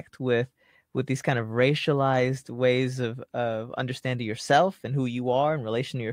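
No technical faults are audible at any point in the speech recording.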